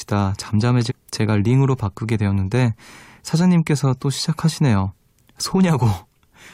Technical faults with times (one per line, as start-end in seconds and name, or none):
0.89-0.92 damaged data in a compressed stream